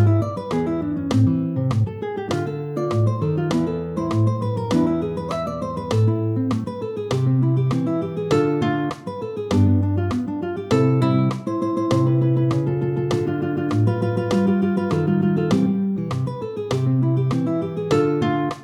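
No technical faults are audible.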